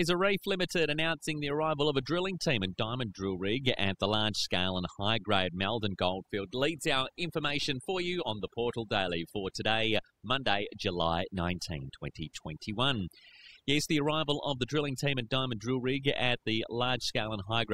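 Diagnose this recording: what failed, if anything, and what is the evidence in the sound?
Overdone noise removal runs throughout this speech, a call-processing stage failure: an over-aggressive suppressor drops bands near its noise estimate, leaving twinkling silence and quiet parts of the voice removed.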